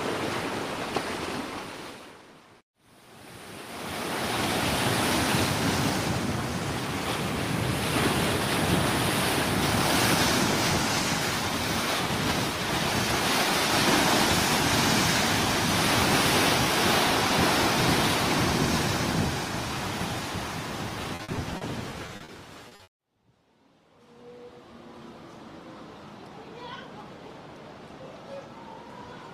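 Repeated packet loss (robotic sound) runs from 21.15 to 22.31 s. Over this stretch of a little more than a second, eight short holes open in the stream. Each is patched by extending the last stretch of audio, and the next arrives before the sound has recovered. About 22% of the span is concealment, with the longest single gap 50 ms. Roughly 200 ms of real audio never arrives, which gives the passage a choppy, robotic texture with pieces missing.

A short stall from a late packet follows at 22.68 to 22.74 s. One packet was not there when it was due, so the jitter buffer ran dry. The receiver held the last sound for about 30 ms until the packet turned up, then carried on from the same point. Nothing is lost, but a sound lingers slightly too long, with a faint buzz or dip, and the playout delay shifts by 30 ms.

Two short concealed packet losses come straight after, at 22.75 to 22.82 s and 22.83 to 22.90 s. 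In each, 40 ms of audio failed to reach the decoder in time and was replaced by a continuation of the preceding sound before blending back into the real signal. They are heard as two quick smears or wobbles in close succession, and a brief sound falling inside either gap can drop out entirely.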